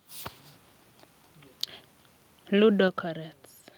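At about 2.88 s the whole speech clip suddenly gets quieter in a single step, roughly 4 dB down, and it stays there. The voice and the background drop together, which is the giveaway that it isn't the talker easing off. That pattern is most likely a microphone volume stepped down: the call software decided the input was running too hot and cut the device's input level in one go rather than riding it gradually.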